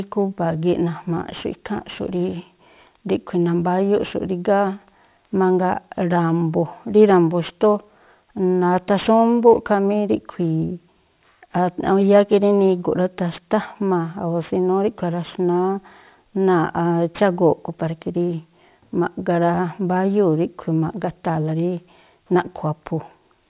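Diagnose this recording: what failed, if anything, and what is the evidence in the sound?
Aliasing runs through the whole speech recording, introduced at sample-rate conversion. Energy above 4 kHz was never filtered out and folds back below that edge, leaving sibilants gritty. This fits a drop from 48 kHz to 8 kHz. A spectrogram shows mirrored images about 30 dB down, packed hard against 4 kHz.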